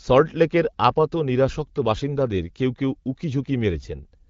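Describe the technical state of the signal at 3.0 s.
At 3.0 s the signal is intact, with the speech carried cleanly through the AMR wideband (HD Voice) codec at 12.65 kbit/s and no fault present at that moment.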